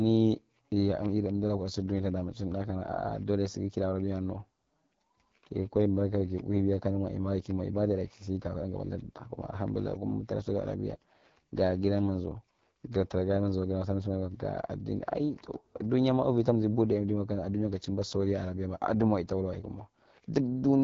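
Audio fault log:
throughout: AMR wideband (HD Voice) codec. Raspy, rough speech fits the 8.85 kbit/s mode. The spectrogram shows smeared harmonics, noise-filled 6.4 to 7 kHz, and nothing above 7.5 kHz.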